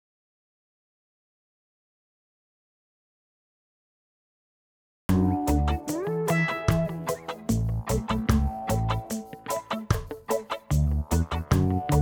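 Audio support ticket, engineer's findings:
Audio dropout to silence, 0.0 to 5.09 s, already under way at clip start. Silence, no room tone; input likely lost via disconnected device, failed link or mute.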